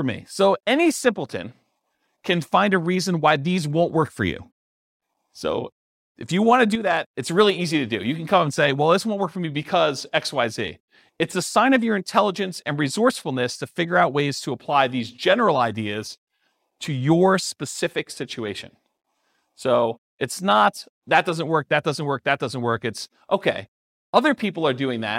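From 6.75 to 7.04 s the speech abruptly drops by about 6 dB and then snaps back, a brief dip lasting roughly 0.28 s. The likely cause is one channel dropping out, so the mono sum keeps only half the shared signal.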